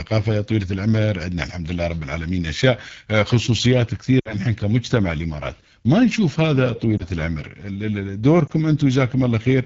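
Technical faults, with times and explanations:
Throughout: AMR wideband (HD Voice) codec at 8.85 kbit/s, one of its two lowest rates, so the speech sounds rough and raspy. A spectrogram shows full detail only up to 6.4 kHz, a smeared noise band from 6.4 to 7 kHz, and nothing above 7 kHz.
4.20–4.35 s, 6.97–7.03 s and 8.47–8.52 s: lost AMR speech frames. Each time, the decoder reused the last good pitch and vocal tract settings at falling gain. At 4.20 s about 60 ms is lost, which fits three missing 20 ms frames, and the sound drops to near silence within two frames. The later two are brief dips or warbles that fit single lost frames. The waveform shows a tapering envelope, and the spectrogram shows frozen, smeared harmonics followed by a weak, rough onset.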